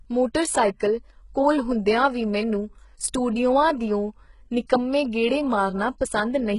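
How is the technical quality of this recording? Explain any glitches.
Quality is poor throughout the speech, with heavy, likely HE-AAC compression damage from start to finish. Nothing sits above about 11.1 kHz, and the treble is rebuilt by copying lower bands upward, so s sounds turn gritty and lispy. The bitrate is about 12 kbps, and the rebuilt treble has a harsh, metallic brightness. A plain low-pass filter would sound dull instead.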